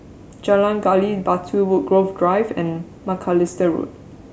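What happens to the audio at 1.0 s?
Nothing goes wrong at 1.0 s; the speech runs through that moment intact, with no dropout, click or distortion.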